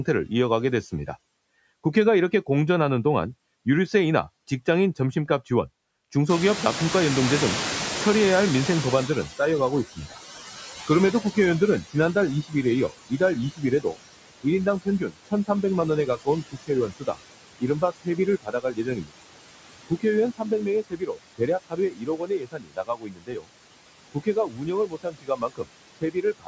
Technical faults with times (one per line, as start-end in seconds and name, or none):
0.00-26.47 noise suppressor artifacts
6.29-12.42 noise suppressor catching up
9.95-10.18 speech cut by the noise suppressor
10.87-19.21 speech cut by the noise suppressor
19.88-23.50 speech cut by the noise suppressor
24.12-26.47 speech cut by the noise suppressor